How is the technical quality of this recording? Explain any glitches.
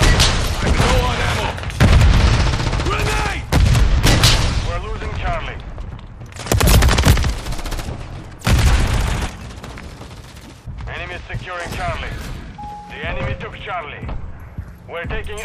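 Nothing in this recording stands out as a glitch; it runs along without any dropouts, clicks or other hiccups to point to.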